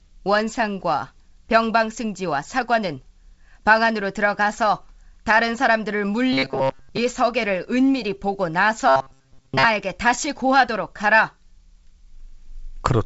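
From 6.33 to 6.99 s, and again from 8.88 to 9.66 s, the speech becomes a rigid metallic buzz at 134 Hz. This is robotic sound from repeated short buffers. Audio likely arrived too late, so a 7.5 ms slice kept repeating over most of the real signal. Throughout, nothing sounds above 7.7 kHz, which fits G.722 wideband telephone coding.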